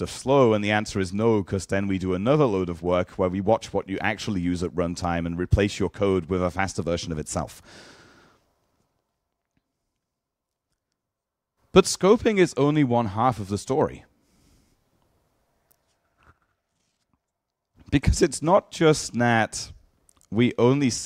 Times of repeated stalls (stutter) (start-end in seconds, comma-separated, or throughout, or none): none